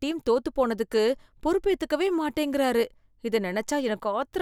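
No technical fault can be heard anywhere in the recording, with the speech signal holding steady and intact throughout.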